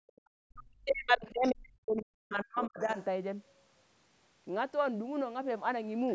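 From 0.3 to 2.97 s the talker's speech keeps dipping and cutting out in pieces, roughly two seconds in all, at worst dropping by something like 40 dB. That's speech suppressed in double talk, likely the echo canceller ducking everything while both sides talked at once.

During that stretch, from 1.26 to 1.49 s, and again from 2.64 to 3.05 s, running just past its end, a faint second voice slips through, well below the talker, around 30 to 35 dB down. That's the other side's voice leaking through, likely loudspeaker echo the canceller didn't fully remove.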